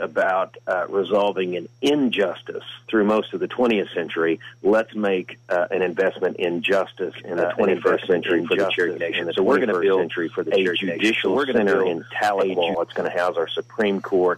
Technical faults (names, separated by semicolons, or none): doubled audio track